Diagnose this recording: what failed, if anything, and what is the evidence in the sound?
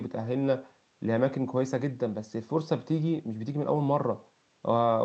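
Nothing in this recording failed.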